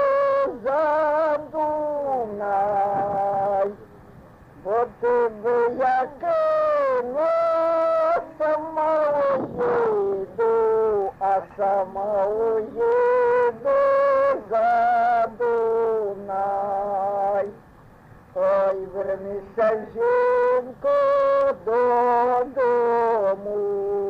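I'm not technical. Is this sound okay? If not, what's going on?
No. Throughout, a low steady buzz of about 43 Hz runs under the sound. This is a block size mismatch (truncated): one stage hands over chunks of audio, which fits a 1024-sample block, and the end of each chunk is lost, so the buzz repeats at that rate.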